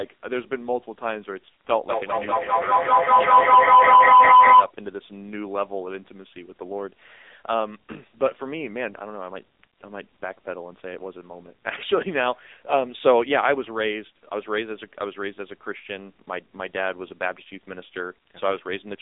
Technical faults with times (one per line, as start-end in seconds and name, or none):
0.00-19.02 AMR narrowband mobile codec
1.89-4.75 feedback howl